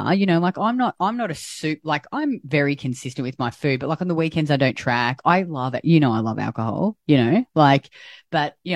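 Nothing in this recording stands out as a technical fault; the speech comes through steady and undisturbed the whole way.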